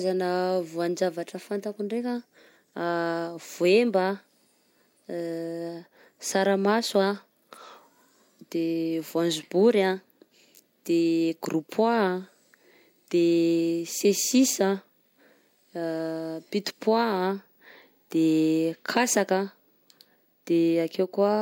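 No technical faults can be heard anywhere in the speech recording, and the signal holds steady and intact over its whole duration.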